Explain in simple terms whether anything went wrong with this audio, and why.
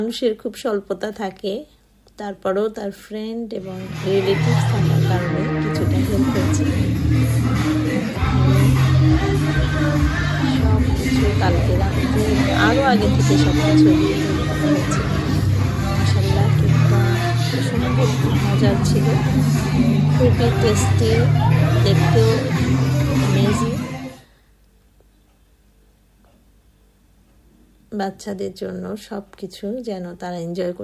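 Nothing went wrong here; there's no glitch, dropout or other technical fault to point to anywhere in it.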